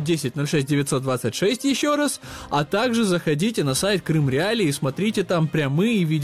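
Nothing in this audio stands out as a technical problem; there are no dropouts, glitches or other faults to point to anywhere along it.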